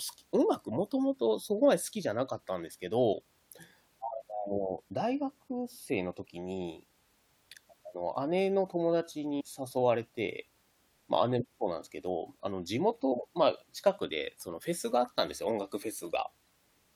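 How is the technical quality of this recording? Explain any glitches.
The recording has three brief glitches, all from damaged data in a compressed stream, at 3.12 to 3.14 s, 9.39 to 9.42 s and 13.11 s. Corrupted frames throw the decoder out of sync while it hunts for the next valid header, leaving a short chirp, click or gap each time.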